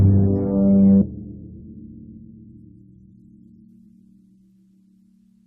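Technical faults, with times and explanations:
1.01–1.03 s, skip ahead: about a second of music vanishes and the two sides are butted together with no silence, so it lurches forward rather than dropping out.
1.11–4.38 s, jitter buffer speed-up: the music runs at about 115% speed, roughly half a second trimmed in small pitch-period slices; tempo rushes while pitch stays unchanged, unlike resampling.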